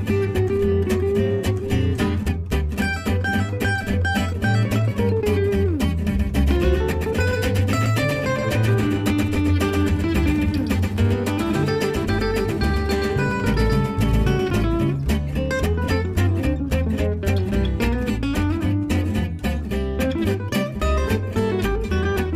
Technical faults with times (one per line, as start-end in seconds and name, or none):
6.06-14.50 doubled audio track